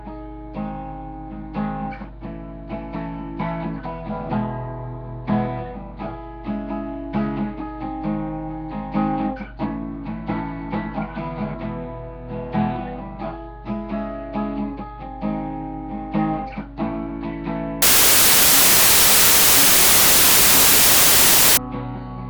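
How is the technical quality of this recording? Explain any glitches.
The recording has one clear fault. From 17.82 to 21.57 s there is a wrong sample width. Packed 24-bit samples are read as 32-bit ones, so bytes from neighbouring samples merge into false values. Loud noise buries the sound, which plays 1.33 times too fast and too high.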